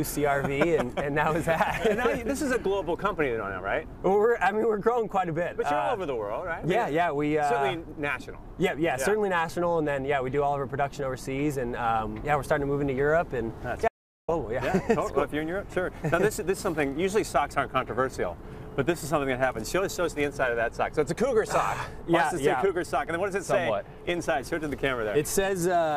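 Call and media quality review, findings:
Audio dropout to silence, 13.88–14.28 s: sound cuts out mid-flow for about 0.40 s, gap dead silent, no room tone. Likely input loss (device disconnect, failed link or stray mute) while recording continued writing silence; content in gap lost.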